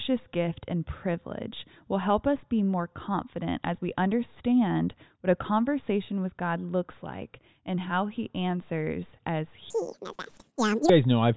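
From 9.70 to 10.89 s, a wrong sample rate: samples are played back twice as fast as they were captured, which fits 8 kHz audio being played at 16 kHz. Speech runs at double speed and jumps up 12 semitones, sounding chipmunk-high and hurried.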